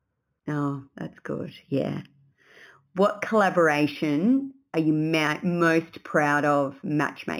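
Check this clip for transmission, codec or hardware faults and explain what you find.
One fault runs through the whole clip: imaging from linear upsampling. Speech sampled at 8 kHz was raised to 44.1 kHz by joining samples with straight lines, a weak filter, leaving a mirrored image in the 4 to 8 kHz band roughly 25 dB down, heard as faint metallic shimmer on sibilants over a dulled top end.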